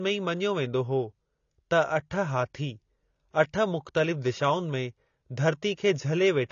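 From start to finish the speech sounds dull and smeared, with nothing above 7 kHz and a fizzy, warbling edge on sibilants. The cause is likely AAC compression, fitting AAC-LC at a low bitrate around 24 kbps, which starves the upper bands.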